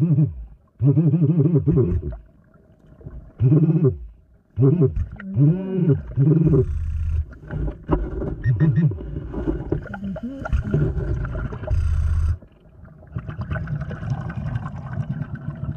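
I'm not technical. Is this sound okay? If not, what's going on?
Yes, this sound is okay, and nothing is going wrong in it.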